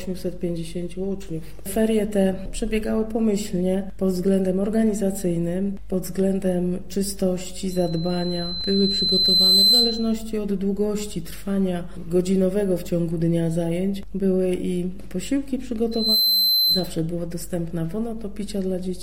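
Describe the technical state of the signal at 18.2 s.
At 18.2 s the signal is intact, with no dropout, distortion, glitch or other audible fault at that moment.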